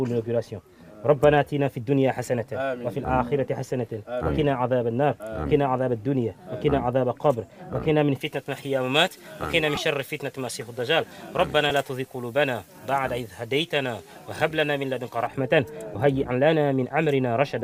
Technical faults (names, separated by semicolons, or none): pre-emphasis left on; lost LE Audio frames